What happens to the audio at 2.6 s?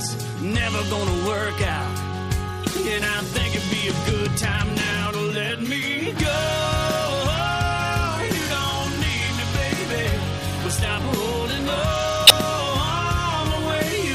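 Damaged data in the compressed stream, from 2.63 to 2.66 s: corrupted frames make the decoder lose sync and hunt for the next header, producing a chirp, squawk, click or brief hole.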